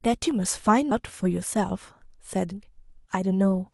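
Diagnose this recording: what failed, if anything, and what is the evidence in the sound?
The codec stage failed: compressed frames were skipped at 0.91 s and 2.51 s. The speech jumps ahead, losing about 150 ms and then about 300 ms, roughly 4 and then 10 frames of 32 ms. Each join is a jump forward in the speech, unlike the silent gap of a buffer dropout.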